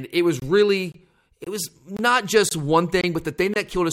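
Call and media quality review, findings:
Gap between chunks: hard-edged silent holes of about 23 ms at 0.40, 0.92, 1.44, 1.97, 2.49, 3.01 and 3.54 s, one per 0.5 s chunk of speech. Probably packetiser or player padding each join; the gap length fits a 1024-sample frame at 44.1 kHz.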